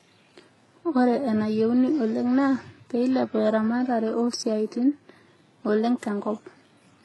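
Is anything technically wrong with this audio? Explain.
Yes. Throughout the speech there is transcoding between lossy codecs, likely a very low-bitrate HE-AAC encode re-encoded to WMA, stacking artefacts under a hard ceiling near 11.5 kHz.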